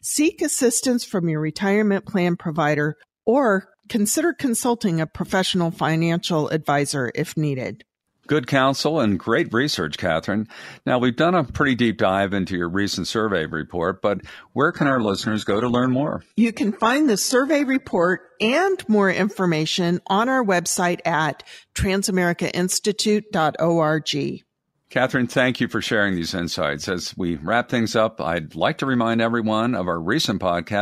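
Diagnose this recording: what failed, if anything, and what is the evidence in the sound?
The network stage failed: the adaptive stream dropped to a lower bitrate from 14.69 to 18.69 s. The speech switches abruptly without a gap, loses everything above 11.8 kHz, and turns artefact-laden, which fits a fall from 96 to 16 kbit/s HE-AAC.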